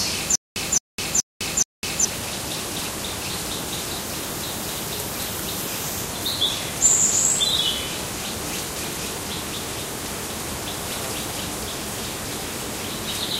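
From 0.35 s to 2.05 s the audio shows a stutter with silent gaps. A burst of sound 218 ms long plays, then drops into digital silence for about 206 ms. The same burst returns four times at an even 424 ms pace. The likely cause is a stalled player or stream that replays its last fragment on each retry and then runs empty. Whatever should have played in those gaps is gone.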